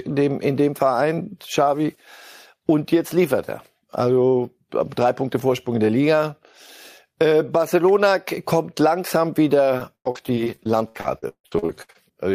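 At 7.88 s, just before "kommt langsam", a sharp snap cuts across the speech: an electrical switching spike, likely from a nearby switch or static discharge arcing into the line. On a waveform it is a thin, near-vertical spike; on a spectrogram, a single broadband vertical stripe.

From 9.77 to 11.97 s, after "kommt langsam", repeated packet loss makes the speech choppy and robotic. Holes up to 157 ms long recur rapidly, each patched by stretching the preceding sound, so about a third of the span is smeared repetition. Spectrograms show frozen, striated harmonics between abrupt edges.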